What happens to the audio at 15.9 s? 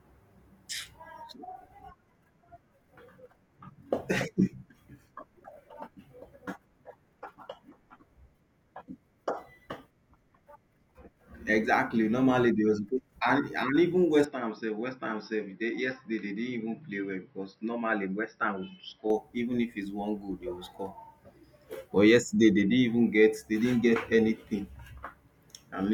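At 15.9 s the speech sits inside a stretch from 14.24 to 19.10 s where the sound most likely comes from an input switched to a poorer device. The system appears to have moved to another microphone or a headset's call profile mid-recording. The voice turns duller, with nothing above 5.7 kHz, drops about 5 dB, and gains a faint new noise floor roughly 45 dB down. The change happens with no gap at the switch.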